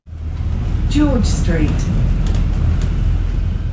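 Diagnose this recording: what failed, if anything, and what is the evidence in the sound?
Nothing stood out on listening; the top end stops around 8 kHz, which is what a wideband G.722 call path delivers rather than a failure.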